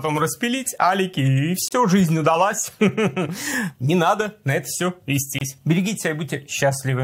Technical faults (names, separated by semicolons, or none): gap at a join of encoded pieces